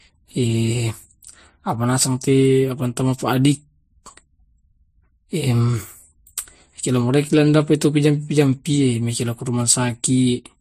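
Transcoding between lossy codecs runs throughout the speech: nothing is heard above 15.2 kHz, and two layers of compression smearing overlap. It likely passed through low-bitrate MP3 and then Vorbis, the second encoder wasting bits re-coding the first's artefacts while adding its own.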